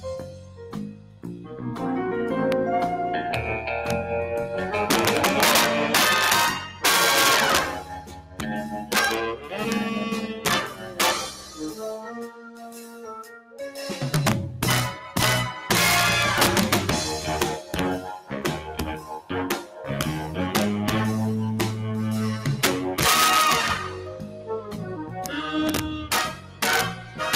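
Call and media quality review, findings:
Integer overflow throughout. Loud peaks crack violently, far harsher than clipping. Probable component: a fixed-point gain or mixing stage. Peaks are driven about 4 dB past full scale. Instead of being limited, they wrap around to the opposite sign and jump across the whole range. Only a small fraction of samples, around half a percent, go over. Each one still produces a sharp crack.

Noise suppressor applied to music or sounds, throughout. A speech-tuned suppressor is still in the chain. Level pumps and flutters, with a swing of roughly 10 dB. Held material and tails thin out while attacks pass. The suppressor treats steady content and ambience as noise and keeps pulling the gain down, then releasing it.

Sound cut by the noise suppressor, at six spans: 0.0–1.61 s, 6.67–6.84 s, 7.8–9.53 s, 10.32–13.59 s, 18.2–19.87 s, 23.88–27.21 s. Steady and decaying sound sinks by about 10 dB at deepest. 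The 6.67 s dip is shorter and shallower, about 7 dB. Decays end early. Same suppressor misclassifies this sound as noise and attenuates it.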